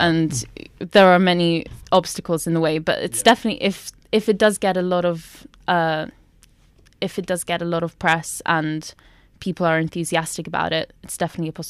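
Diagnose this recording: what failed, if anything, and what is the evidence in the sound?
The stage that failed is the level going into the converter, and the fault is hard clipping. Loud speech peaks crackle at 0.96–1.15 s, just before "are many", and at 1.95–1.97 s, before "in the way". They crackle again at 3.27–3.31 s and at 8.08–8.13 s, between "lot of" and "and people are enthusiastic". Each peak was driven about 2 to 3 dB past full scale. The converter cut the tops flat, which added high harmonics.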